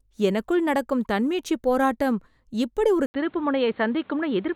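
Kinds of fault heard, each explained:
Input switched to a poorer device: at 3.06 s, after an 80 ms gap, the speech turns dull, with nothing above 4.4 kHz, likely from a change to another microphone.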